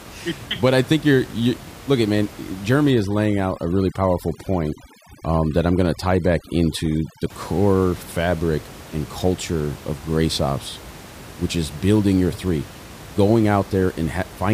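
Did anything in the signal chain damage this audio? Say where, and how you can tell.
Yes. Between 2.91 and 7.30 s the speech shows overdone noise removal, a call-processing stage set far too aggressively. The room noise, sitting about 19 dB below the speech, collapses to near silence with twinkling specks. The suppressor is cutting individual frequency bins whenever they fall near its noise estimate, taking quiet speech detail with them. A spectrogram shows the noise floor blotched into isolated flickering dots, with speech harmonics ragged and gapped.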